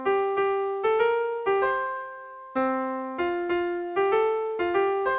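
No technical faults occur at any point, and the narrow call-path bandwidth, with nothing above 4 kHz, is simply how the line sounds.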